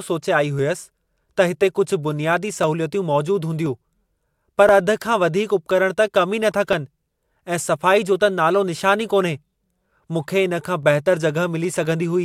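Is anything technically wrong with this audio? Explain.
Yes. From 0.59 s to 11.86 s the speech carries a regular tick about every 1.02 s, roughly ten in all, audible only where the voice is sounding. These are periodic USB or driver dropouts. At that fixed interval something briefly stalls the USB bus or audio driver, and a tiny slice of audio, around half a millisecond, is skipped outright. The waveform jumps across the gap, and each discontinuity comes through as a click.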